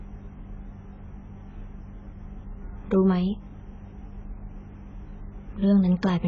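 Speech with heavy AAC compression damage throughout: dull, smeared and fizzy, cut flat at 7.6 kHz on a spectrogram, likely from a bitrate around 16 kbps.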